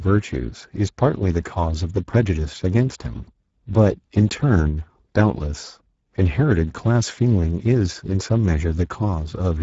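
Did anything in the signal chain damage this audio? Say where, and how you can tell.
Yes. Throughout the clip the speech sounds hoarse and grainy, and nothing comes through above 7.7 kHz. This is damage at the codec stage from the Speex codec. The consistent CELP roughness, which fits a low bitrate of roughly 10 kbps, comes from having too few bits to code the excitation accurately. The upper band up to the cut-off carries only a shaped, noise-like fill rather than real detail.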